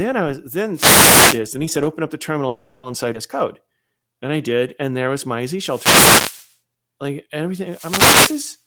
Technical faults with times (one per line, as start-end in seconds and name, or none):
0.72-1.41 wireless microphone noise hit
2.47-2.86 call audio freeze
3.13-3.17 skip ahead
3.67-4.99 jitter buffer slow-down
5.57-6.54 wireless microphone noise hit
7.64-8.59 wireless microphone noise hit